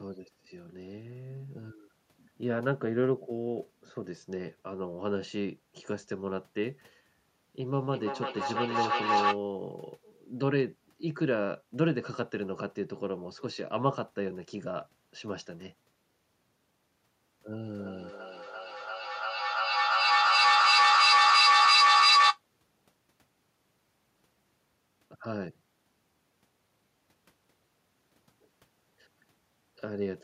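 Feedback howl from 7.73 to 9.43 s: a mic-to-loudspeaker loop gaining level each trip builds a tone near 700 Hz, pulsing about every third of a second, about 5 dB above the speech.

Feedback echo between two devices from 17.63 to 22.42 s: one device replays the other's microphone, so each word returns roughly every 300 ms, piling up to about 10 dB over the speech.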